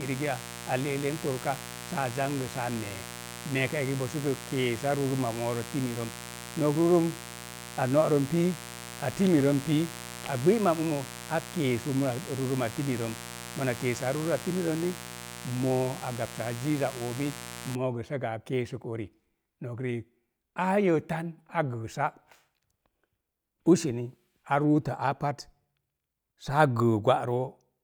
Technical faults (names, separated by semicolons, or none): mains buzz